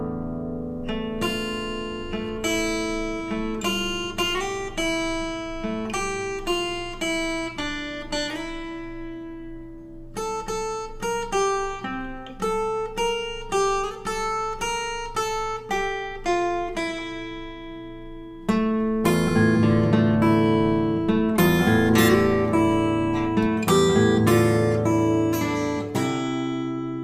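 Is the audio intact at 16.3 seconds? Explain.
Yes, at 16.3 seconds the audio is intact, with no dropout, click, distortion or other fault at that point.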